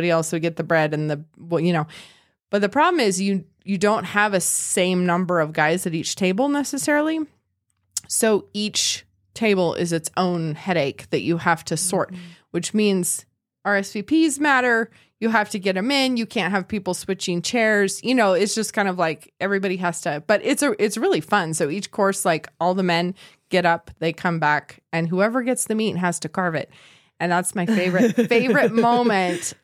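No technical faults can be heard at any point in this speech recording. Nothing in the signal path calls for comment.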